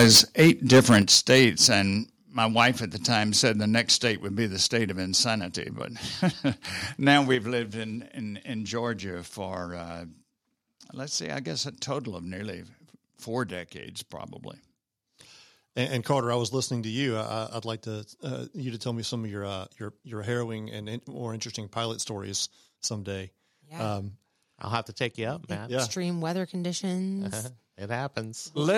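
From 0.0 to 1.67 s the speech has a harsh, crackling edge. This is microphone overload. The peaks run about 12 dB past the converter's limit, and their tops are sheared flat. About one sample in twenty is clipped. The likely cause is input gain set too high.

At 1.02 s the level drops abruptly by about 6 dB. This is a microphone volume step-down. The background falls with the speech. The likely cause is call software cutting the device's input gain in one step.

At 2.04 s the level falls again, by about 4 dB. This is another step-down, likely from the same automatic gain control.

From 2.59 to 2.67 s, just before "at the", the microphone overloads again. The tops are clipped by about 4 dB, with a small share of samples affected. The brief crackle likely comes from input gain still set too high.

At 7.35 s, just before "lived in in in", the volume steps down once more, by about 4 dB. The likely cause is the software lowering the input again.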